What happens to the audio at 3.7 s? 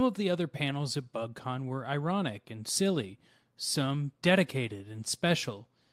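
Nothing goes wrong at 3.7 s: the speech plays through that moment intact, with no dropout, click or distortion to be heard.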